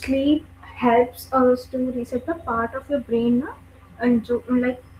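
No technical faults turn up anywhere in this speech clip. The Opus voice compression is working as intended, running in hybrid mode at 24 kbps with the full band kept and leaving only light traces of coding.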